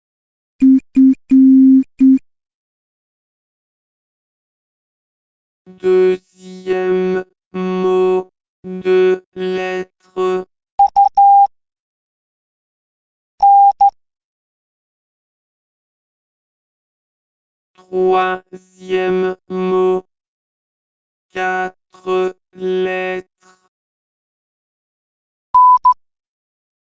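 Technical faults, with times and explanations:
Nothing technical trips up here; the audio runs along without a single hiccup worth flagging.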